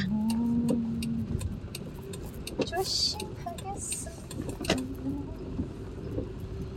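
No technical faults detected anywhere in the audio.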